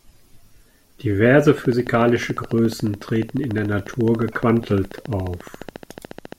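A steady ticking runs over the speech from 1.58 s to 6.33 s, a train of clicks at about 14 per second with even spacing, around seventy in all. The clicks share one sharp shape, stand out at about 5 dB above the speech, and keep going through the pauses. A repeating pulse of this kind is likely interference from nearby equipment or a faulty connection or power supply injecting the same glitch at a fixed rate.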